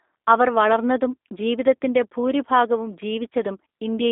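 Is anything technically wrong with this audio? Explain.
Yes. G.729 codec coding runs throughout the speech, resynthesising each frame from a vocal-tract filter and sparse pulses, which fits 8 kbit/s. The result is rough and synthetic, band-limited to about 250 Hz to 3.7 kHz, with nothing above 3.8 kHz.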